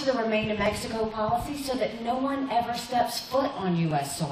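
Two devices running on separate clocks likely drift apart by around 700 ppm, so the buffer between them periodically drops or repeats a few dozen samples. These clock drift buffer slips recur every 1.08 s from 0.66 to 3.91 s, heard as about four regular clicks.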